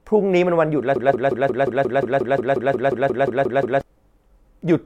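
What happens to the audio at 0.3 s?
Nothing goes wrong at 0.3 s; the speech carries on intact through that moment.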